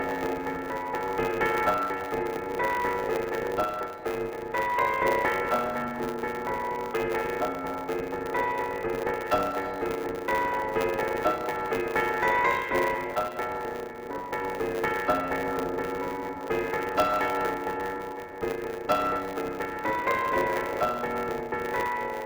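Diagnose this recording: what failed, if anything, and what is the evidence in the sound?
A block size mismatch (truncated) at the driver or buffer stage runs through the whole recording. A steady buzz at 100 Hz sits under the sound, and everything plays about 1.09 times too fast while keeping roughly its normal pitch. One stage hands over longer blocks than the next accepts, so the tail of each block is dropped. On a spectrogram this shows as vertical seams every 10 ms with a 100 Hz harmonic comb. The waveform shows a step at each seam.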